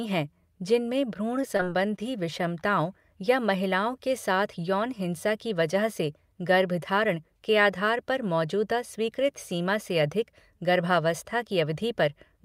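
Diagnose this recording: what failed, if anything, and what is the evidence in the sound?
The network lost packets, and the receiver's concealment covered the gaps. That is short concealed packet loss, at 1.41 to 1.45 s and again at 1.57 to 1.70 s. Each time about 20 ms of real speech never arrived. The decoder extended the preceding sound for 15 to 20 ms, imitating its pitch or its noise, and then faded back into the real signal. This is heard as a brief smear or wobble. The second event is stretched slightly, so a small amount of extra time is added.

At 1.96 to 2.00 s the jitter buffer ran dry because a packet arrived late, which is a short stall from a late packet. No speech is lost. The receiver held the last sound for about 20 ms until the packet turned up and then continued from the same point. The sound is drawn out with a faint buzz or dip, and everything after it plays about 20 ms later than before, because the network delay rose by that amount.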